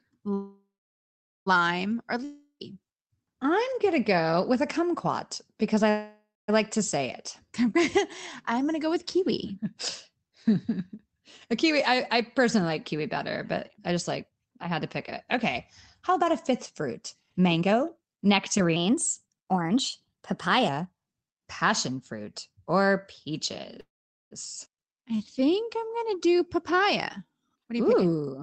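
At 0.33 s the sound stops and a call audio freeze begins. The last sound carries on as a fading buzz, then about 0.81 s of silence. It lasts until 1.48 s, 1.13 s in all. The likely cause is packets held up in transit while the jitter buffer ran dry. Nothing is lost. The speech resumes where it left off, just 1.13 s later.

From 2.24 to 2.62 s comes a long network dropout. The tail of the previous sound is stretched into a fading hiss for 0.36 s, ending in about 0.1 s of silence. The likely cause is packets that never arrived at all. When the speech returns, roughly 0.36 s of it has gone. The two sides do not join up.

A second call audio freeze runs from 5.90 to 6.50 s, between "a kumquat because I" and "like to say it". It is 0.58 s long, with about 0.24 s of silence after the fading buzz. Again the likely cause is late packets and an empty jitter buffer. The speech continues intact, only delayed.

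From 8.58 to 22.73 s a jitter buffer speed-up is at work. The buffer had built up more audio than its target. To shed the excess, the receiver kept cutting out short pitch-period pieces, about one and a half seconds in total. The speech runs at 112% of its normal pace. The pitch stays the same, so it simply sounds hurried.

Inside that stretch, from 18.76 to 20.68 s, is a section at the wrong speed. Here speed and pitch rise together, by a factor of 1.12. The voice jumps up about two semitones and sounds higher and rushed. It then drops back just as abruptly. The likely cause is that this section was played against the wrong clock.

At 23.80 s a third call audio freeze sets in and lasts until 24.33 s. That is 0.51 s, of which about 0.45 s is near silence after a brief fading buzz. The likely cause is delayed packets starving the jitter buffer. The speech picks up from the same point, with nothing lost.

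Right after, at 24.65 to 24.68 s, comes a skip ahead. Roughly a fifth of a second of audio was dropped while later packets were already waiting. Playback leaps forward with almost no gap. The sound on either side is spliced nearly directly.

A jitter buffer slow-down follows from 24.82 to 27.28 s. The receiver repeated single pitch periods and bits of pause to rebuild a reserve. It added 172 ms in total. The speech runs at 93% of normal pace, at unchanged pitch. Sounds are drawn out.

From 27.45 to 28.37 s, a jitter buffer speed-up comes in hard. The receiver cut roughly 0.4 s of pitch-period pieces to bring the delay back down. The speech runs at 143% of normal pace. The pitch holds, but the words are clearly rushed.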